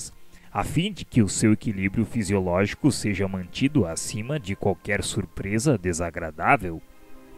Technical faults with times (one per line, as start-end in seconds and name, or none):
0.38-0.43 one channel drops out